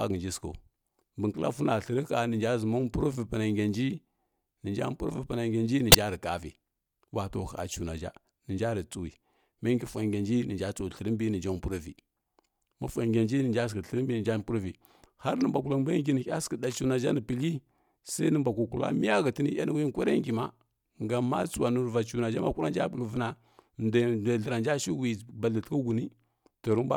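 At 5.90 to 5.95 s and again at 15.41 s, a corrupt frame decoded produces a brief chirp, blip or burst: damaged bits in a couple of frames put energy at the wrong frequencies. The first is loud, the second much fainter; each shows as a short vertical smear on a spectrogram.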